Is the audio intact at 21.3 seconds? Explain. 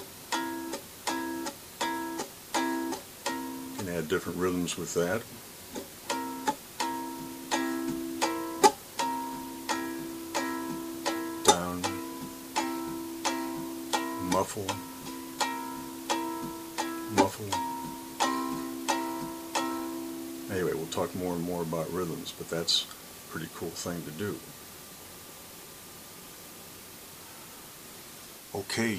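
No. At 21.3 seconds, as everywhere else in the clip, a constant, even hiss sits close under the sound, only around 15 dB below it, yet without any crunchy or gritty distortion. This is low bit depth with dither. The signal was rounded to very few levels, which fits roughly 7-bit resolution, and random dither was added before rounding. The dither turns the rounding error into steady white noise instead of distortion that follows the signal.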